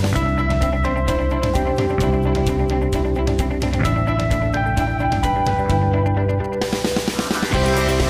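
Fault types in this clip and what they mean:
GSM signalling bursts: From 6.06 to 7.02 s, a nearby 2G phone's radio pulses get rectified into galloping ticks and 217 Hz buzzing, roughly 20 dB under the sound.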